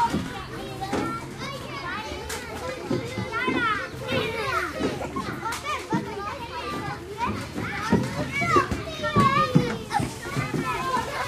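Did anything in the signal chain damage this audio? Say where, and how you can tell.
No, nothing in the signal chain stood out as damaging this audio on listening.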